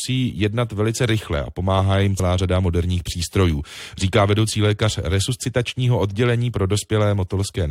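At 2.18 s there is a brief glitch. It comes from damaged data in a compressed stream. Corrupted bytes made the decoder lose frame sync.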